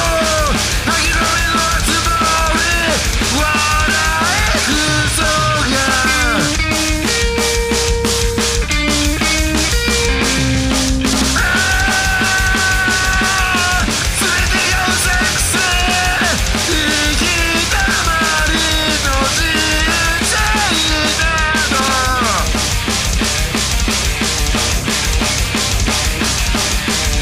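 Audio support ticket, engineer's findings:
No faults found on listening; nothing to flag for follow-up.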